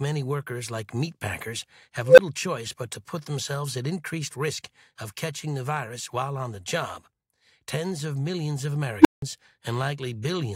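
Unstable filter at 2.05 s and 9.01 s: a recursive filter's feedback ran away, so a tone swells until it clips, overflows and drops out. After "workers like meatpackers have", a tone of roughly 500 Hz builds over 131 ms, then 12 ms of silence precedes "choice but to put". After "of millions of", a roughly 300 Hz squeal builds in 40 ms and is followed by 174 ms of silence.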